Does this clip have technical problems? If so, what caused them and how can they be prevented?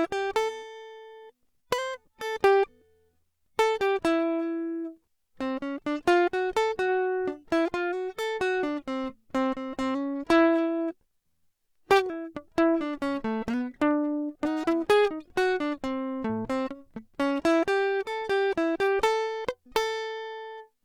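No, nothing in this music clip stood out as a technical problem on listening.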